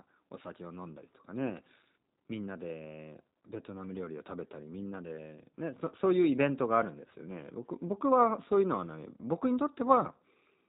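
From start to finish the speech carries the sound of the G.729 codec, here apparently its G.729A form, running at 8 kbit/s. Each 10 ms frame is rebuilt from a vocal tract filter, a pitch predictor and a sparse set of pulses rather than from the original waveform, and nothing above 4 kHz survives. The damage is plainly audible: the voice stays intelligible but sounds muffled, slightly rough and synthetic throughout.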